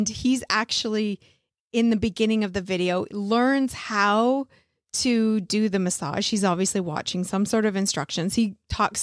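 No technical faults are audible.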